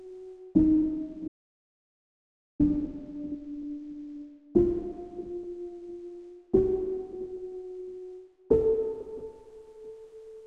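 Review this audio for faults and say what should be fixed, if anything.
The input feed was likely interrupted, through a loose connection, a dropped link or an accidental mute, while the recorder kept writing silence. The result is an audio dropout to silence from 1.28 s to 2.60 s: the sound cuts off abruptly and resumes just as suddenly, leaving about 1.32 s of dead silence with no room tone, and whatever happened in that span is lost. Securing cables, monitoring input levels live and locking mute controls during capture would prevent this.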